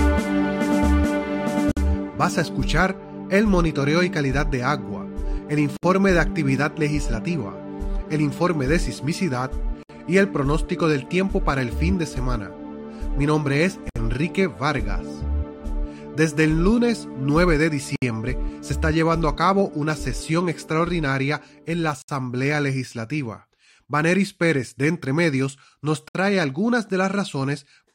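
At 1.72, 5.77, 9.83, 13.89, 17.96, 22.02 and 26.08 s, brief silences cut into continuous sound, repeating about every 4 s. These are gaps at joins of encoded pieces. The first lasts 52 ms, the rest 64 ms. Untrimmed encoder delay and end padding remain at each seam. Edges are smeared by the codec, and the sound resumes where it stopped.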